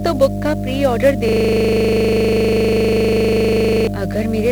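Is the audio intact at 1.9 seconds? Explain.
No. A system hang loop runs from 1.29 to 3.87 s, just after "बुक का प्री ऑर्डर". The playback hardware kept recycling one 40 ms buffer while the system was frozen, so 1.9 s falls inside a rigid 25 Hz buzzing stutter rather than real speech. Throughout the clip there is also 50 Hz mains hum, a steady low drone from power-line coupling that sits nearly as loud as the speech itself. On top of that, heavy 1-bit DFPWM compression, which fits a bitrate of around 48 kbps, leaves the whole signal fuzzy and crackly with the treble buried in hiss.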